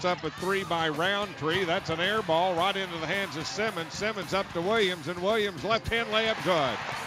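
Nothing technical stands out in this audio; there's no fault to point to anywhere in it.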